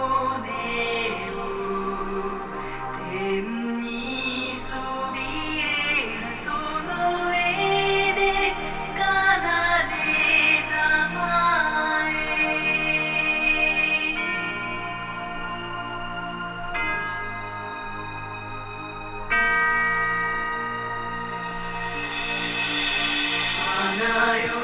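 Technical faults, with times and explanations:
No technical faults can be heard anywhere in the clip. Nothing in the audio calls for a timed entry or an explanation.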